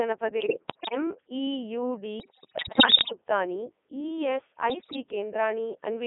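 The speech has passed through the Codec 2 vocoder. Instead of carrying the waveform, the codec sends only pitch, voicing, energy and a spectral envelope, and the decoder rebuilds the voice from sine waves. The damage is heavy, even in the 3.2 kbit/s mode. The result sounds robotic and buzzy throughout, confined to a narrow band of roughly 200 Hz to 3.5 kHz.

Bit errors on digital voice radio strike three times. At this low bitrate each corrupted bit changes the pitch, level, voicing or spectrum of a whole frame, so the synthetic voice lurches unpredictably. From 0.40 to 0.95 s, at an error rate of around 5 percent, the voice jumps in pitch and level. The worst burst runs from 2.20 to 3.12 s, with roughly 15 percent of bits flipped, and the speech dissolves into bleeps, warbles and robotic gibberish. A shorter burst from 4.70 to 4.96 s, at about 10 percent, brings abrupt shifts in tone colour.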